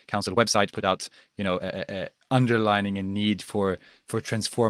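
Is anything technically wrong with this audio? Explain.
Yes. From 0.0 to 1.84 s the speech runs about 1.62 times fast and sounds rushed while its pitch stays normal, then the pace drops abruptly. This is likely a time-stretched section, squeezed by dropping short slices. Unlike a simple speed-up, the pitch doesn't rise.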